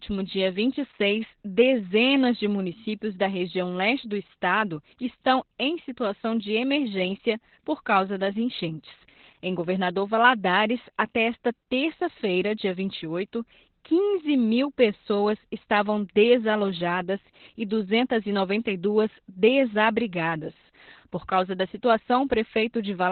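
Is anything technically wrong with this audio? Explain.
Yes. Throughout the clip, the speech has gone through Opus voice compression at a very low rate, consistent with about 8 kbps. At that rate the encoder stays in its SILK linear-prediction mode and drops to narrowband, so nothing survives above about 4.3 kHz, and the excitation is coded very coarsely. The damage is heavy: the speech sounds muffled and telephone-like, with a hoarse, slightly robotic edge in place of natural breath and sibilance.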